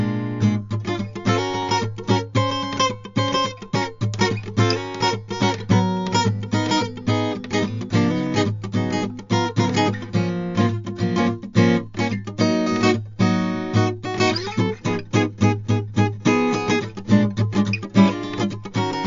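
Throughout this music clip the treble stops dead at about 7.2 kHz, and the sound turns watery and swirly, with smeared attacks, the signature of MP3 compression at a starved rate, likely around 48 kbps. Unlike a plain low-pass filter, weak frequency lines flicker on and off frame to frame.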